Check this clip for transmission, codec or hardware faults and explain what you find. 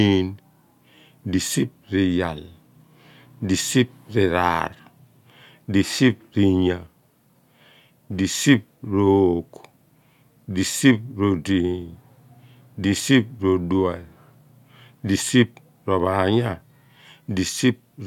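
No faults turn up in this speech recording. Nothing in it needs a timestamp or an explanation.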